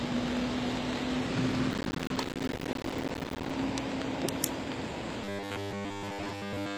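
Throughout, the audio carries the marks of HE-AAC compression, likely at a low bitrate around 24 kbps. The encoder spends its bits on the lower spectrum and synthesises the treble by copying lower bands upward under a coarse envelope. Nothing reaches above 14.9 kHz, and the rebuilt top end sounds false. Its harmonics don't align with those below the crossover, so the high detail comes across gritty and metallic, and the codec damage is plainly audible.

From 1.71 s to 3.50 s the processor falls behind and misses one deadline after another on short buffers of around 5 ms. Each miss drops in a brief gap of silence with hard edges, and with so many in quick succession the gaps add up to a burst of processor overload crackle. It sounds like gritty tearing laid over the sound, and it stops once the load clears.

From 5.24 s to the end, new audio likely stops arriving in time, and playback fills the wait by looping the last short buffer while the real signal is skipped entirely. 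A loop of about 10 ms repeats 100 times a second, which imposes a fixed 100 Hz buzz. The result is robotic sound from repeated short buffers: a rigid, metallic buzz that only loosely follows the shape of the original audio.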